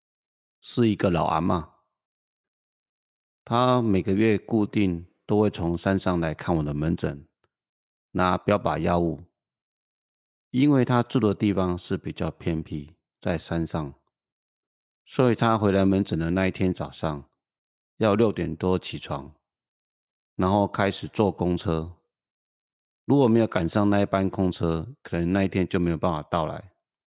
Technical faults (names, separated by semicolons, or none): none